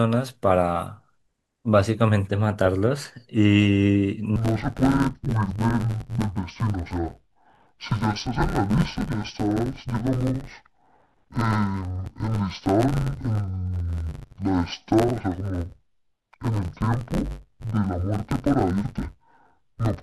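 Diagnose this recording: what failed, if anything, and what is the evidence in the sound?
From 4.36 s to the end, the speech turns dull and robotic with a steady buzz near 93.8 Hz: interleaved audio read as planar at the buffer stage. Each 10.67 ms block, which fits a 512-sample buffer, is split into halves, unlike a channel swap, which leaves the sound clean.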